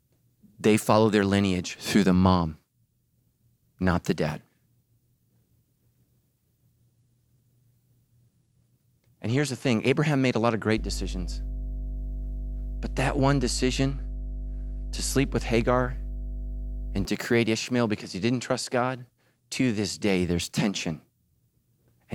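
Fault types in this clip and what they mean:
Mains hum, 10.8 to 17.1 s: a loud 50 Hz tone under the speech, the power line coupling in through a ground loop or transformer.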